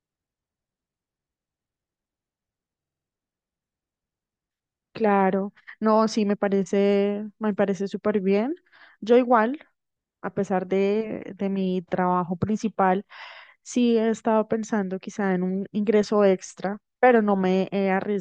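At 2.83 s the speech freezes into a system hang loop until 3.07 s. The driver stalled while the hardware replayed its ring buffer. A 46 ms slice, which fits a 2048-sample buffer, repeats five times. It makes a rapid stutter at 21.5 Hz. Virtually nothing seems lost.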